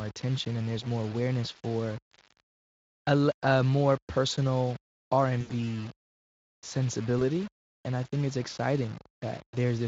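Low bit depth without dither runs through the whole speech clip: a grainy distortion that moves with the voice, roughly 20 dB below it, likely from rounding to about 6 bits with no dither, so quiet passages turn gritty and the softest stretches sputter or drop out.

VoIP packet loss concealed by the speech codec appears at 5.41 to 5.50 s, a gap of about 80 ms that fits four lost 20 ms frames. The decoder repeats its last pitch and filter at falling gain, so the voice is stretched into a sound that fades. At 7.19 to 7.22 s a single 20 ms frame is patched the same way, giving a brief stretched sound that fades. Around both gaps the Speex coding at 23.8 kbps adds only light colouring.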